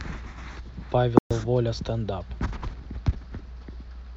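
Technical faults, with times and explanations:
1.19 to 1.31 s, playback stall: the speech halts mid-flow and the output falls to silence for 120 ms, then resumes. This is likely the player briefly running short of data or having its output thread blocked. Unlike a dropout or lost packet, the sound simply stops for a noticeable moment, a pause inserted into the flow.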